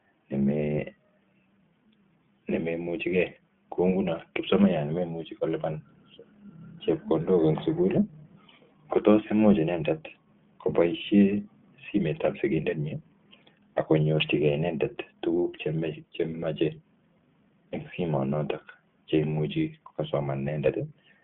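Throughout, the iLBC codec coding in independent 20 ms frames, which fits its 15.2 kbps mode, confines the speech to 150 Hz–3.4 kHz and leaves it plainly rough and synthetic.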